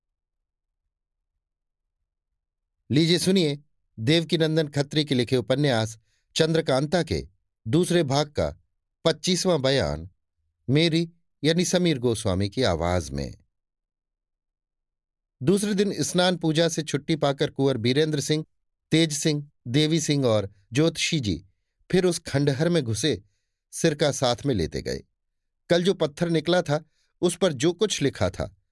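No technical faults can be heard anywhere in the speech, so there is nothing to describe in time order.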